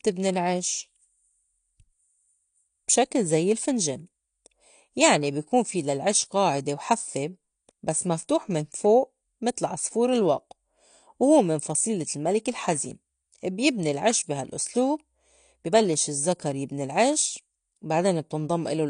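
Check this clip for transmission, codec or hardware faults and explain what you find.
One codec fault runs through the whole speech clip. It is AAC compression, likely AAC-LC at a low rate. Nothing is heard above about 9.8 kHz, so the top end is dull and airless. The damage is plainly audible. Sibilants turn fizzy, and sustained sounds warble. The encoder quantises each frame's frequency lines coarsely when bits are short. It drops the highest band and leaves gaps elsewhere. That fits a bitrate near 32 kbps.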